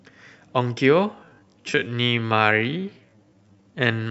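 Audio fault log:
1.11–4.10 s, time-stretched section: from 1.11 s to the end, the speech abruptly slows to about 0.6 times its pace while its pitch stays put. That is most likely software lengthening the audio by repeating short pieces. The stretched part drags. On a spectrogram, harmonics keep their spacing but syllables widen and transitions blur. The waveform shows drawn-out envelopes with repeated, near-identical cycles.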